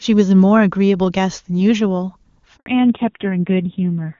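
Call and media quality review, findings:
Handover gap, 2.56 to 2.66 s: 100 ms dropout, speech dies away within tens of milliseconds, then silence. Network handover; no speech frames delivered during link switch, so audio in that window is lost, not concealed.

Fallback to narrowband, 2.66 s to end: nothing above 4 kHz, speech duller and rougher. Codec renegotiation from HD Voice (clean, wideband-sounding before 2.56 s) to a narrowband codec; roughness points to a low AMR-NB rate, around 5.9 kbit/s.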